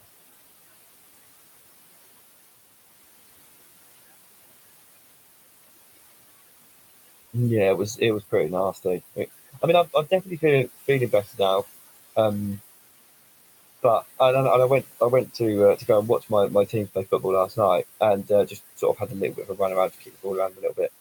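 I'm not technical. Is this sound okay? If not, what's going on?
No. All the way through, the background noise sinks in the pauses and swells back under the talking. These are noise suppressor artifacts: a filter keeps turning the room noise down and back up as the speech starts and stops.

Near the end the speech itself gets swallowed in places, from 16.68 to 17.54 s, 18.24 to 19.6 s and 19.93 to 20.79 s. Short bits go faint, a brief slice in the first stretch and more in the later two. This is speech cut by the noise suppressor: it mistook those quiet sounds for noise and turned them down too.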